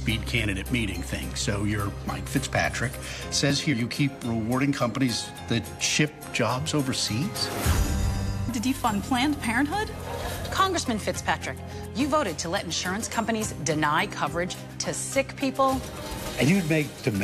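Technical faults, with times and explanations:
3.72–3.74 s and 8.48 s, damaged data in a compressed stream: corrupted frames made the decoder lose sync and hunt for the next header, leaving a brief glitch in the sound.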